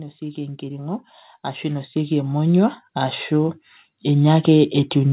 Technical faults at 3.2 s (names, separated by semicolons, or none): automatic gain rising